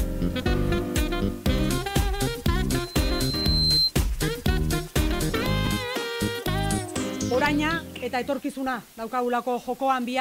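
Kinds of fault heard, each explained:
Low bit depth with dither: a steady, even hiss sits under the whole clip with no grittiness, roughly 25 dB below the sound, because the audio carries only 7 bits and dither turned the rounding error into constant white noise instead of distortion.
Lost LE Audio frames: brief noisy smears replace the sound at 0.42 s, lasting 7.5 ms, and at 5.65 s, lasting 15 ms, where the LC3 decoder filled the lost Bluetooth frames by reusing the previous spectrum with randomised signs.
Loudspeaker feedback squeal: a single tone at 4.1 kHz swells over about a second from 2.69 s, ending at 3.93 s and rising to roughly 5 dB above the sound, as the microphone picks up its own loudspeaker and that frequency's loop gain exceeds one.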